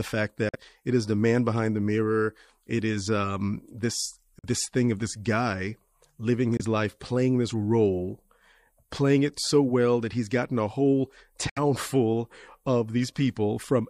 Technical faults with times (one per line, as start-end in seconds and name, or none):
0.49-0.56 Bluetooth dropout
4.39-4.45 Bluetooth dropout
6.57-6.62 Bluetooth dropout
11.49-11.58 Bluetooth dropout